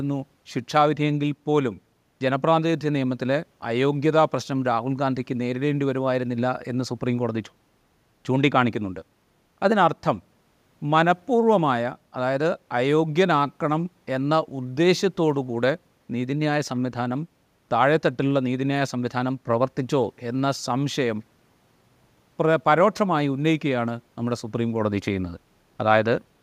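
No technical faults are audible.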